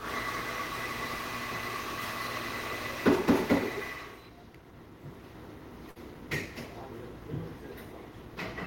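An everyday-sound clip with a burst of packet loss at 5.89–5.98 s: the last sound is stretched and faded over 60 ms rather than dropping to silence, then resumes with 60 ms skipped.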